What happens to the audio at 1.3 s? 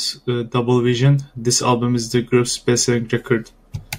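Nothing goes wrong at 1.3 s; the speech plays through that moment intact, with no dropout, click or distortion to be heard.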